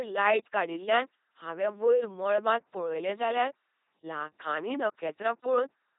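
From start to finish, the speech passes through an LPC-10 vocoder, and the damage is heavy. The voice buzzes like a machine. Each moment is coded as fully voiced or fully unvoiced. Voiced parts come from a pulse train through a simple tract filter. Unvoiced parts come from noise. Wrong voicing calls add stray buzz or hiss. Nothing is heard above 3.8 kHz. The sound fits the 2.4 kbit/s LPC-10 rate.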